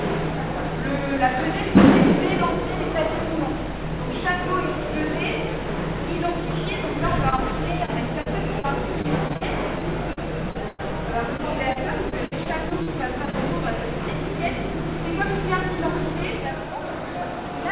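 From 7.3 to 13.35 s the audio breaks up with repeated packet loss, giving a robotic sound. 22 short holes fall in quick succession, the longest about 101 ms. Each is papered over by stretching the preceding sound, so the stretch turns choppy, with roughly 11% of it concealed. Unlike a single dropout or steady codec grit, the damage recurs. The band stays capped near 4 kHz throughout, which fits a telephone-grade G.711 path.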